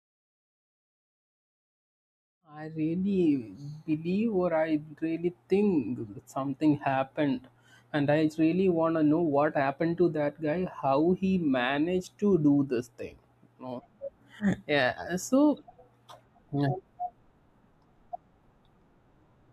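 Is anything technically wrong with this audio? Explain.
No, the speech signal is technically sound, with a smooth fade-in that begins at around two and a half seconds and reaches full level by 3.2 s with no click or hard edge.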